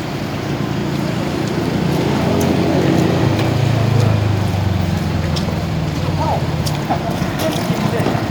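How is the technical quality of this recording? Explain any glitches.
No glitches are audible anywhere in the recording, so there is nothing to explain.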